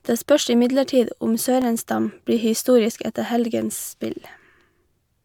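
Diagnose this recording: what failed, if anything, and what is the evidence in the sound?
A regular ticking runs through the speech from 1.62 s to 5.11 s, right after "spørs imidlertid om", one tick every 0.5 s. These are periodic USB or driver dropouts at the driver or buffer stage: a blocking background task briefly starves the audio path, leaving about a millisecond of silence each time.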